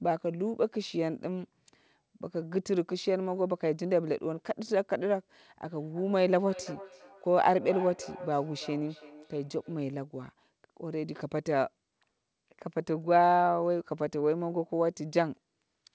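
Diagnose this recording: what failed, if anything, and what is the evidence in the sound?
What failed is a feedback echo between two devices, which is a call-processing problem. From about 5.64 s to 9.88 s the speech comes back around roughly every third of a second, with each repeat thinner and more ringing, peaking at about 15 dB below the direct speech. A second device in the same room is playing this call into the mic, and the echo canceller can't remove audio that a different device played, so the loop just keeps circulating.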